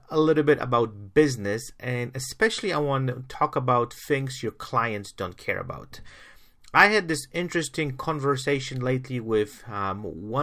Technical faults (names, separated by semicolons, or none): none